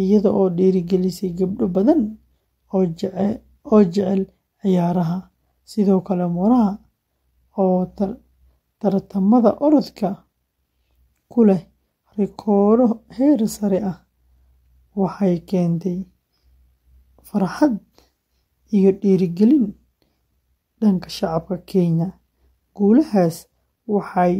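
No technical faults are audible.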